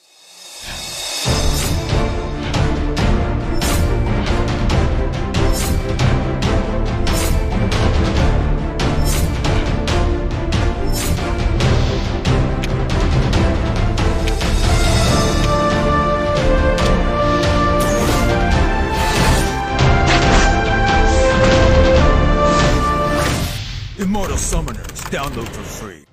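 From 19.39 to 23.07 s, digital radio blending to analogue: the receiver cross-faded to FM over 0.48 s, adding faint hiss and shifting the level by about 2 dB.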